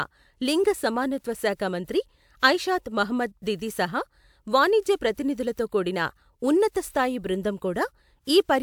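No technical faults can be heard anywhere here.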